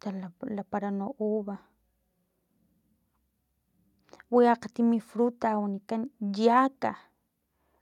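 No technical faults can be heard anywhere in the speech recording. Nothing in it calls for a time mark or a note.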